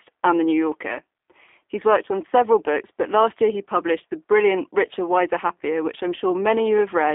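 From start to finish the speech carries plainly audible G.729 codec damage, consistent with an 8 kbit/s G.729A link. Each 10 ms frame is rebuilt from a vocal tract filter, pitch prediction and a few pulses. Nothing above 3.7 kHz survives, so the sound is band-limited, slightly rough and synthetic.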